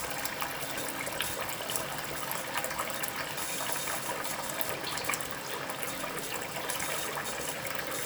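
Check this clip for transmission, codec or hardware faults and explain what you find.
Nothing stood out on listening to this audio.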